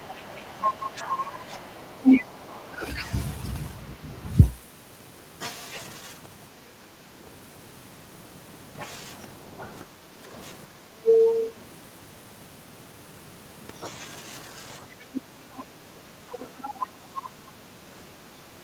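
From 0 to 2.68 s the other side's voice is leaking through. The far-end talker, played on the device's loudspeaker, is likely left behind because the echo canceller removed only part of it. The same second voice returns from 11.02 to 11.53 s and from 15.13 to 16.7 s.

Speech is suppressed in double talk from 0.39 to 1.73 s, with the talker dipping by about 5 dB. From 2.68 to 2.89 s it drops by about 20 dB, from 9.58 to 11.06 s by about 10 dB, and from 14.79 s to the end by about 10 dB. Here the canceller likely turned everything down while both sides spoke.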